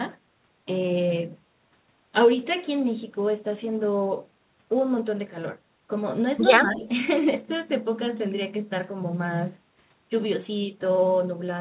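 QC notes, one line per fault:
6.58–6.87 s, speech suppressed in double talk: the speech sags about 10 dB for roughly 0.3 s, likely the echo canceller turning it down while the far end also talked. Unlike a packet-loss gap, the level dips rather than dropping to silence.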